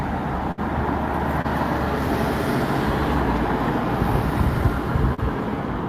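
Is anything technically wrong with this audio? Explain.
Yes. There are three dropouts from lost audio packets.

The first is a burst of packet loss from 0.51 to 0.59 s. Several consecutive packets failed to arrive in time. About 60 ms of the sound is gone for good. The receiver covered the hole by stretching the last good audio for about 61 ms and fading it down. The result is a held, dimming smear. Then the sound jumps ahead, with the lost stretch simply skipped.

Two shorter gaps follow, each a short concealed packet loss. The first runs from 1.41 to 1.46 s, with 20 ms missing and 27 ms filled. The second runs from 5.14 to 5.20 s, with 40 ms missing and 34 ms filled. In both, the decoder extrapolated from the preceding sound and then crossfaded back into the real signal. Each is heard as a brief blur or flutter rather than clean silence. Whatever fell inside those instants is lost.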